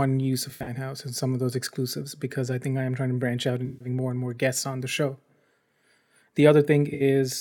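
AAC frame loss with concealment occurs three times: 0.50–0.70 s before "house and some of" (128 ms lost in bursts, longest about 70 ms), 3.66–3.88 s after "trying to branch out" (149 ms), and 6.94–7.02 s (64 ms). Each gap is patched from the last good spectrum, giving brief smeared, phasey sound.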